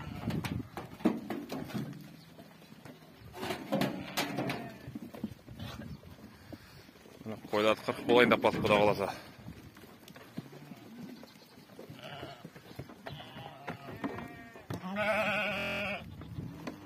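At 15.58 to 15.81 s a system hang loop occurs: playback froze while the hardware kept replaying one 23.2 ms slice, which fits a 1024-sample buffer, ten times over, producing a steady 43 Hz buzz. The waveform shows identical repeated blocks; the spectrogram shows evenly spaced 43 Hz harmonic stripes.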